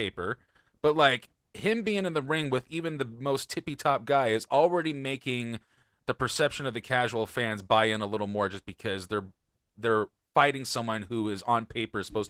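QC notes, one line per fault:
No faults found.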